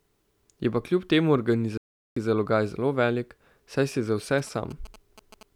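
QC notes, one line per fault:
1.77 to 2.16 s, playback stall: the speech cuts out mid-flow and the output sits silent for about 390 ms, then the sound carries on. A gap like this, with the audio simply halted rather than damaged, is what you hear when the player runs short of data or its output thread gets held up, so the likely cause is a starved or blocked playback buffer that recovered after roughly four tenths of a second.
4.38 to 5.43 s, GSM signalling bursts: a galloping dit-dit-dit of short buzzing clusters rides under the speech, sitting around 20 dB below it, with the buzz at about 217 Hz. That rhythm comes from a 2G phone nearby sending only brief groups of radio bursts while signalling, not the steady stream of a call, and the audio circuitry rectifies that RF into audible short buzzes.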